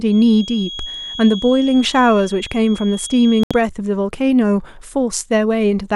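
From 0.0 to 3.63 s a thin, steady feedback whistle at 3.3 kHz sits well below the speech. It is likely a loudspeaker-to-microphone loop held at the edge of feedback, visible as a lone horizontal spectrogram line. At 3.43 to 3.51 s a digital broadcast dropout mutes the audio for about 72 ms, consistent with three lost frames. The waveform shows a flat gap and the spectrogram a blank vertical strip.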